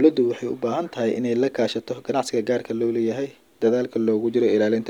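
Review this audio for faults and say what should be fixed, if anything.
Nothing here needs fixing, since no faults turn up anywhere in this speech clip.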